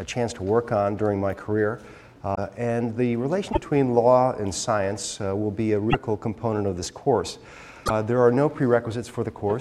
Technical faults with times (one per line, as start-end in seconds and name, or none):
2.34-2.38 broken MP3 bit reservoir
3.51-3.58 broken MP3 bit reservoir
5.89-5.95 broken MP3 bit reservoir
7.85-7.91 broken MP3 bit reservoir